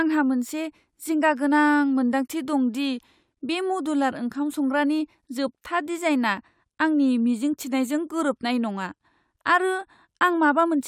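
No technical faults can be heard anywhere in this speech clip.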